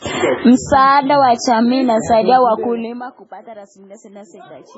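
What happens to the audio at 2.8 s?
Zipper noise runs from 2.36 to 3.28 s, just after "wa jamii": the level drops about 20 dB in unsmoothed 2 dB steps, roughly fifteen per second, each clicking into an audible ticking zip. Underneath, heavy watery, swirly smearing with nothing above 7.7 kHz points to likely MP3 compression at a very low bitrate, around 16 kbps.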